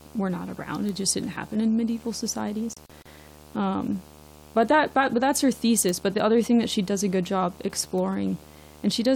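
Video or display buzz runs under the speech from start to finish: a screen or video cable couples into the audio path, giving a 75 Hz buzz with hash above it, around 25 dB below the speech. A spectrogram shows a steady 75 Hz line and its harmonics across the whole clip.

At 0.89 s comes the first bit error spike, a single flipped bit in one sample that jumps the value by a power of two and snaps back. It is heard as one sharp tick, and on the waveform it is a lone vertical needle.

From 2.74 to 3.06 s a digital broadcast dropout punches holes in the speech as the receiver loses valid frames and mutes. About 96 ms goes missing in gaps of up to 32 ms spread across 320 ms, which fits three lost frames. The waveform shows flat silent gaps and the spectrogram shows blank vertical strips.

Further bit error spikes follow at 4.63, 5.89 and 7.98 s. Each is an isolated click unrelated to the speech, with a broadband vertical streak on the spectrogram.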